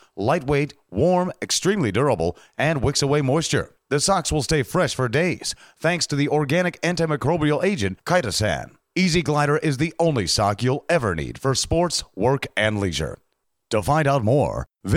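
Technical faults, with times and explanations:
No technical faults are audible.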